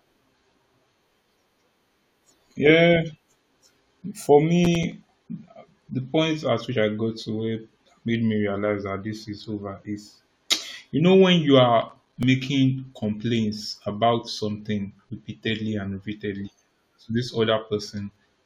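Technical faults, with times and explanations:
4.65 to 4.92 s and 11.82 to 12.23 s, processor overload crackle: a gritty, tearing crackle, the second just after "you know when you". The processor missed a string of roughly 5 ms buffer deadlines, a handful then about ten, and each miss left a hard-edged gap of silence.
6.75 s, compressed frames skipped: between "the point at" and "I got to where", the sound jumps forward by about 20 ms.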